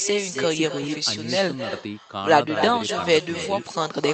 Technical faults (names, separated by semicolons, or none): echo with no canceller